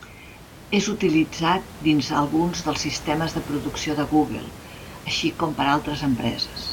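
Speech recording with no technical fault in its signal path; the only background is the room's own noise, captured by the microphone along with the speech and sitting about 16 dB below it.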